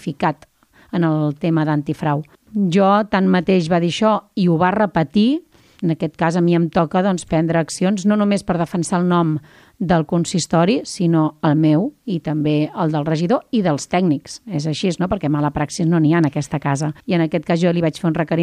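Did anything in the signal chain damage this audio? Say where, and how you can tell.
No, nothing audible points to damage at any stage of the chain, from capture through to playback.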